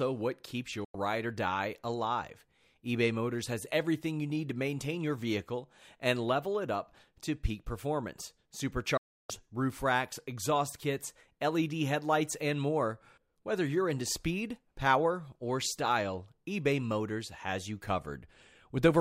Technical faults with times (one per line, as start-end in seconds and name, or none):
0.84-0.95 digital broadcast dropout
8.97-9.30 digital broadcast dropout